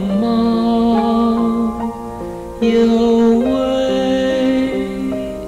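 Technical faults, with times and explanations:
2.63 to 3.36 s: hard clipping. The signal is driven about 3 dB past the limit of one stage, so peaks are sliced flat, adding high harmonics heard as crackly distortion.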